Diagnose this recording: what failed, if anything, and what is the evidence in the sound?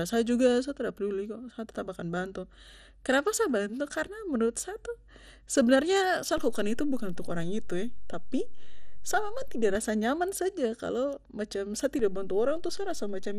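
The speech sounds dull throughout, with a gurgling, granular roughness on every phrase and nothing at all above 14.8 kHz. This points to the codec stage, most likely MP2 compression at a low rate, consistent with about 64 kbps. Layer II splits the signal into 32 sub-bands and shares out a limited bit budget among them. Upper bands get switched off entirely, and the bands that remain are quantised coarsely enough to be plainly audible.

A low thump lands at 6.38 s, just after "sa tu sebenarnya sa". A second thump follows at 9.75 s as the offset releases, right before "rasa nyaman saja kalo". Another thump comes at 11.99 s after "saja kalo macam sa", and that offset holds to the end. The speech carries on unchanged through each one. This is a DC step at the converter stage, where the waveform's zero line jumps, as with a recalibration or an offset input being switched in.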